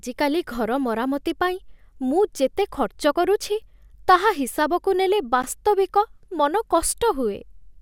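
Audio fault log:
5.42 s, gap at a join of encoded pieces. A 13 ms gap opens in the speech, then it carries on exactly where it stopped. Two separately encoded stretches were joined here without trimming. The encoder's start-up delay and the padding on the last frame of the earlier piece both stayed in, leaving this short hole. Its edges are smeared by the codec, so the truly silent part is shorter.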